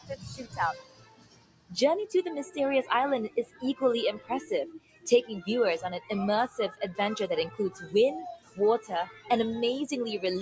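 A speech-tuned noise suppressor is running over the whole thing, treating sustained material as noise, so the level pumps by about 15 dB while attacks punch through. It clamps down hardest at the start, from 0 to 1.8 s, where the sound sinks by up to about 18 dB. Shorter sound cuts by the noise suppressor follow at 3.29 to 3.63 s, 4.18 to 4.49 s, 4.74 to 5.07 s (another deep one, about 18 dB), 6.48 to 6.81 s, 7.5 to 7.94 s (lightest, about 8 dB), 8.35 to 8.59 s and 8.8 to 9.3 s. In each, held sound and tails get swallowed and fluttery, all within a call-style band that tops out at 8 kHz.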